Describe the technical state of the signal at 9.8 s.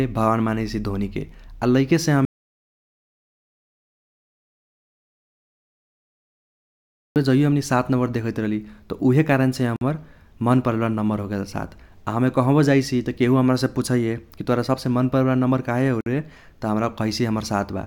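A gap at a join of encoded pieces sits at 9.76 to 9.81 s, a silence of about 50 ms cut into the running speech. The audio was encoded as separate segments and spliced back together untrimmed, so one run's trailing frame padding and the next run's start-up delay both survive as dead air. The codec smears the edges of the dropout, so the truly silent part is shorter, and the speech resumes exactly where it broke off.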